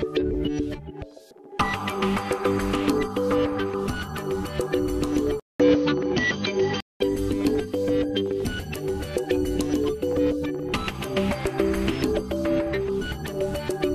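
From 5.40 to 7.00 s, the sound turns dull and boxy, with nothing above 6.4 kHz and a 200 ms gap at the switch. The input likely switched to a poorer device. A spectrogram shows a flat ceiling, a level shift of about 5 dB, and new noise about 35 dB down.

Between 12.98 and 13.02 s, compressed frames were skipped, jumping the audio ahead by roughly 50 ms. The waveform shows a discontinuous splice, and the spectrogram a short vertical streak.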